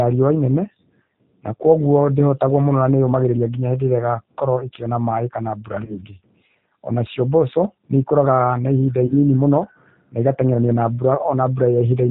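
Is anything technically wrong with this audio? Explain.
Yes. The speech has two technical faults: G.729 coding throughout, and two short dropouts hidden by packet loss concealment.

For the whole clip, the speech is carried by the G.729 codec, here the G.729A variant at 8 kbit/s. Instead of sending the waveform, the encoder sends a model of it: a vocal tract filter, a pitch predictor and a few excitation pulses per short frame. The decoder rebuilds speech from those parameters, and nothing above 4 kHz survives. The damage is plainly audible, with a dull, band-limited sound and a rough, slightly synthetic edge on the voice.

VoIP packet loss concealed by the speech codec occurs twice.

The first is at about 5.85 to 5.96 s, just after "ĩkĩona maĩ kana bura".

The second is at about 9.06 to 9.14 s, between "mboco nĩĩkoraga na ihinda" and "mũno na igateng'erania".

Each time, 30 ms of audio never arrived, which fits a single lost packet. 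The decoder filled the gap by extending its last pitch and filter settings while fading the gain. This turns the sound briefly buzzy or noisy and smeared. Because each frame builds on the previous one, the voice stays weakened for a short while after the audio resumes.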